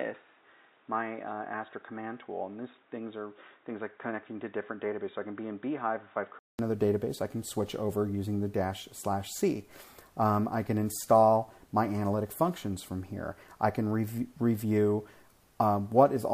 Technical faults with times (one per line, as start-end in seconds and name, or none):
0.00-6.59 input switched to a poorer device